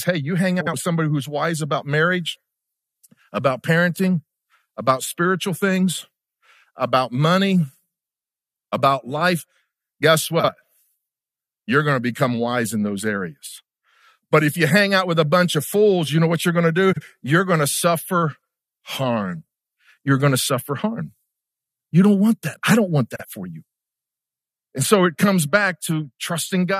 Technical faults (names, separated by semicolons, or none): frames out of order